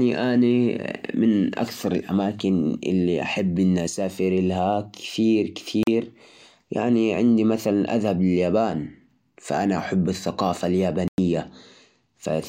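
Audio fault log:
5.83–5.87 s and 11.08–11.18 s, Bluetooth dropout: the speech cuts to silence for about 40 ms, then about 100 ms, likely from packets lost on the wireless link. Unlike a stall or buffer underrun, it resumes later in the speech, as if it had played on.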